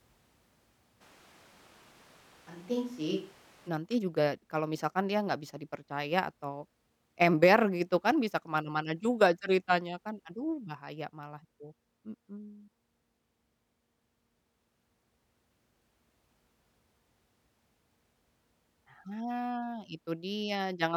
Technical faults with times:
1.02-3.67 switch to a distant microphone

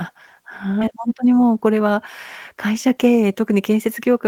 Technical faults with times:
0.81-0.83 skip ahead
0.91-1.81 jitter buffer speed-up

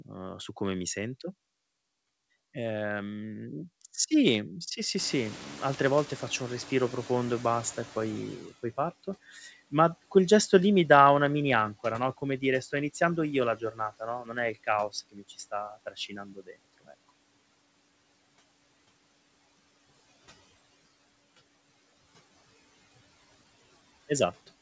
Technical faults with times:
4.98-8.54 noise suppressor catching up
9.29-9.53 speech cut by the noise suppressor
13.56-14.37 speech cut by the noise suppressor
15.12-17.10 speech cut by the noise suppressor

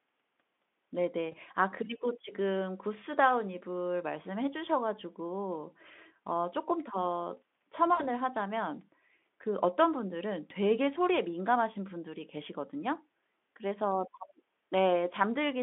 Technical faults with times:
1.31-1.35 VoIP packet loss concealed by the speech codec
7.94-8.13 VoIP packet loss concealed by the speech codec

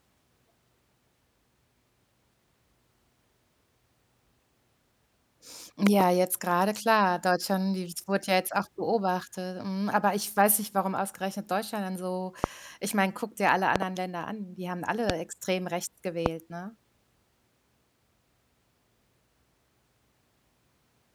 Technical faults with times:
5.87-6.03 loud pop
12.44-12.46 loud pop
13.76-13.84 loud pop
15.10-15.12 loud pop
16.26-16.28 loud pop

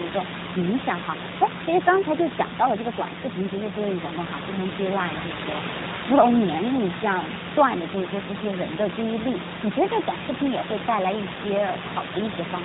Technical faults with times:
0.00-12.65 G.729 codec

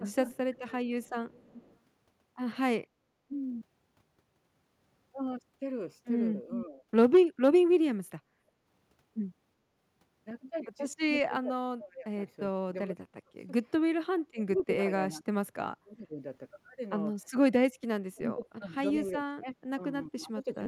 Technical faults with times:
0.00-0.68 speech suppressed in double talk
0.12-1.77 echo leak
6.46-6.82 speech suppressed in double talk
7.92-8.27 speech suppressed in double talk
8.55-8.64 background gated by the echo canceller
11.10-16.21 speech suppressed in double talk
14.57-14.61 echo leak
18.15-20.66 speech suppressed in double talk

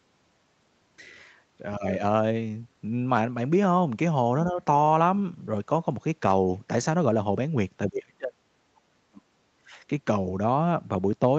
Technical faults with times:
1.77-2.01 speech suppressed in double talk
7.87-9.77 speech suppressed in double talk

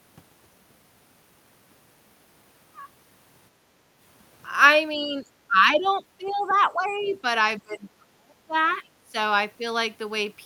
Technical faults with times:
3.67-3.75 background gated by the echo canceller
4.97-7.24 speech suppressed in double talk
5.84-5.88 other side's voice leaking through
6.26-6.55 other side's voice leaking through
6.89-7.12 other side's voice leaking through
7.59-9.15 speech suppressed in double talk

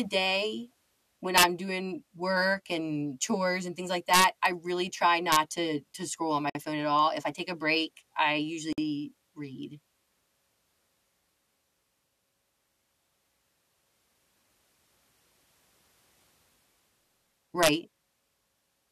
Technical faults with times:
1.38-1.44 integer overflow
4.14-4.46 integer overflow
5.32-5.36 integer overflow
6.50-6.55 gap at a join of encoded pieces
8.73-8.78 gap at a join of encoded pieces
17.63-17.69 integer overflow

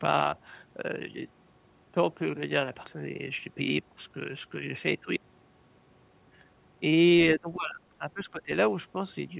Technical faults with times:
7.36-8.51 speech suppressed in double talk

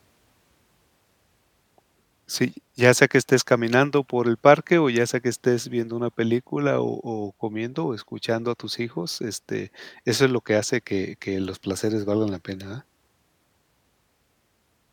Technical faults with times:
none

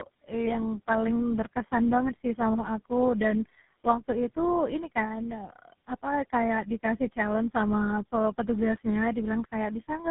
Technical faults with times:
0.00-10.11 tandem speech coding

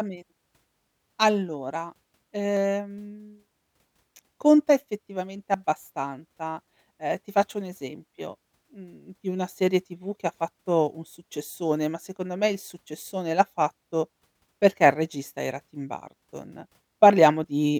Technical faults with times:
2.57 audio missing between chunks
5.54 audio missing between chunks
11.49 audio missing between chunks
17.44 audio missing between chunks

